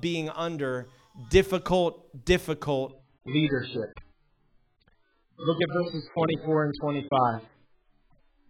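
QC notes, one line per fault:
2.90 s to the end: adaptive stream at a lower bitrate. The speech suddenly goes dull and boxy, with nothing above 4.8 kHz, and a watery, synthetic smearing comes in at once, with no gap at the switch. The player has dropped from a high-quality rendition to a far leaner one, probably because the connection slowed. The sound points to AAC-LC falling from around 96 kbit/s to around 8 kbit/s, where the encoder discards the treble and coarsens what remains.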